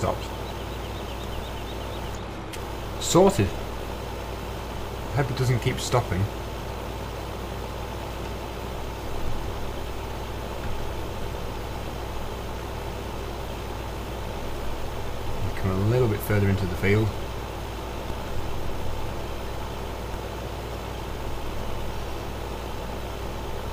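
At 1.39 s and again at 9.28 s the waveform's zero line jumps by about -24 dBFS, a DC step. Further steps of about -22 dBFS follow at 18.10 s and 20.14 s. Each offset then drains away through a 20 Hz high-pass, so the baseline settles back gradually. Every step is heard as a short low thump, while the sound itself continues unchanged around the shifted baseline.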